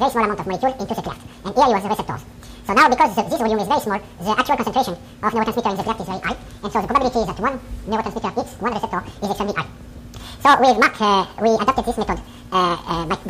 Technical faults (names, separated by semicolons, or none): audio read two samples at a time (double speed)